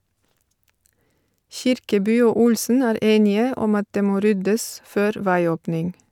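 Nothing in the speech recording stood out as a technical problem on listening.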